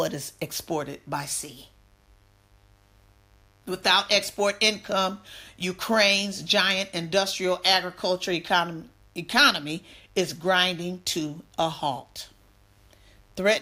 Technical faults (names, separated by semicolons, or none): mains buzz